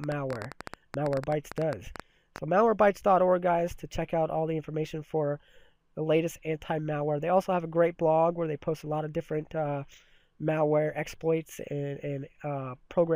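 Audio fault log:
0.04–2.39 s, train of clicks: sharp, near-identical ticks pop out over the sound at about 10 per second on an uneven pace, some thirty in all, peaking about 10 dB above the audio. The likely cause is interference or a faltering interface injecting repeated pulses.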